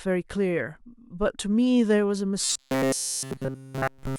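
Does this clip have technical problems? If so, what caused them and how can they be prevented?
Yes. From 2.40 s to the end, the speech turns into robotic sound from repeated short buffers: a rigid, metallic buzz at 133 Hz that only loosely tracks the speech. The likely cause is audio arriving too slowly, so a chunk of about 7.5 ms is replayed throughout instead of fresh samples. A spectrogram would show flat, evenly spaced harmonics at multiples of 133 Hz, and the waveform would show the same short cycle copied over and over. Larger buffers and a steadier delivery path would prevent it.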